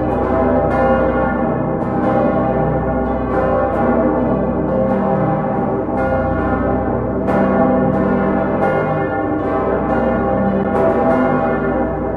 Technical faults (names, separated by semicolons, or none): CD skip